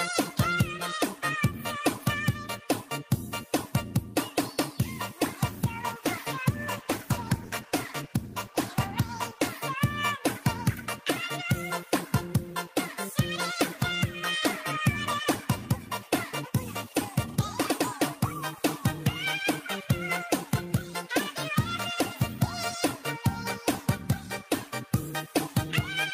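From 5.49 s to 9.57 s there is a call bitrate drop. The connection's bandwidth estimate fell, and the encoder was pushed down to a much lower bit budget for about 4.0 s. The sound fits a fall from 48 kbps to about 18 kbps. With fewer bits, the codec quantises the signal more coarsely and trims the high-frequency band, so the audio turns rough, watery and duller until the rate recovers near 9.57 s.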